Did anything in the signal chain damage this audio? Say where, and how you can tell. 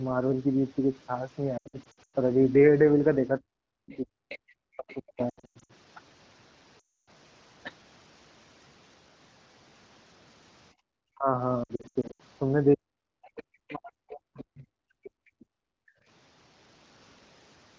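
Yes. Lost AMR speech frames at 1.57–2.16, 5.29–5.72, 6.79–7.10 and 11.63–12.22 s come from the radio link. The decoder stretches the last good frame and fades it, so the audio warbles and dips.

Speech suppressed in double talk at 3.39–5.19, 11.13–11.38 and 12.75–15.92 s comes from call processing. The voice drops by up to about 40 dB in pieces, likely because the echo canceller mistook overlapping talk for echo.

The other side's voice leaking through appears as faint scraps at 3.90–3.97, 4.29–4.38, 4.89–4.96 and 13.37–13.75 s. They sit about 20 to 25 dB below the speech, likely residual loudspeaker echo.

Background gated by the echo canceller at 10.73–10.85 s is also call processing. The room sound drops by about 33 dB for roughly a tenth of a second while the microphone is clamped.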